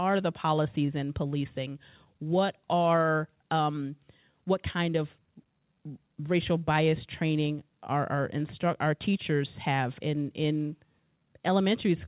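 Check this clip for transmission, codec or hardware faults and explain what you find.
Two related timing faults run through the whole recording, both from the two ends of the call running on clocks that disagree.

Clock drift between sender and receiver, throughout: the speech has small, unevenly spaced timing hiccups from start to finish, never settling into a steady flow. The cause is the sender's audio clock running roughly 5% slower than the receiver's. Audio arrives more slowly than it is played out, so the jitter buffer keeps heading toward empty and the receiver has to keep making up the shortfall as the call goes on.

Repeated timing corrections, from 0.03 s to 12.06 s: across this stretch playback runs at 96% speed. That amounts to about half a second of extra material over the clip. The receiver stays in step with the slower sender by repeatedly repeating short pieces of audio. 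Every edit pushes in the same direction, lengthening the audio, but the edits land at irregular points.

The audio is band-limited to 4 kHz, which fits a G.711 A-law call path at 64 kbps.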